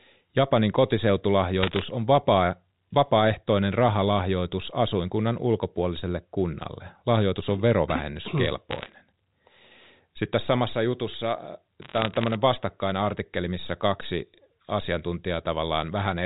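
Bit errors on a digital phone line strike at 1.61 to 1.82 s, just before "on vapaa vapaaehtoinen rahalahjoitus", again at 8.71 to 8.92 s, and at 11.82 to 12.35 s, ending before "vastakkainen artikkeli missä kaksi". Flipped bits in the G.711 A-law stream corrupt single samples, and a flip on a sign or high-order bit throws that sample far off. The result is sharp ticks massing into crackle over otherwise intact speech, densest in the first burst, where roughly one bit in a hundred is wrong.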